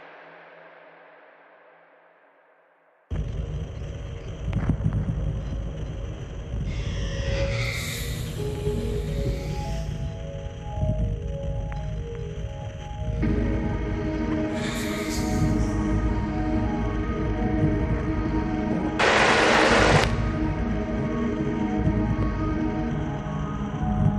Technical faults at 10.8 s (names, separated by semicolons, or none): none